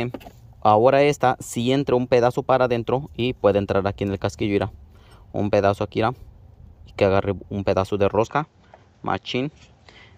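Likely input switched to a poorer device at 8.27 s: without any gap or level jump, the sound narrows to nothing above 7.8 kHz, with faint new background noise.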